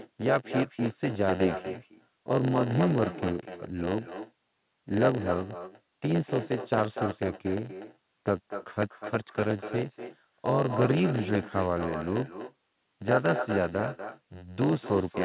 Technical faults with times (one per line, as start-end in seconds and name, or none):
0.00-15.24 block size mismatch (padded)
0.00-15.24 echo with no canceller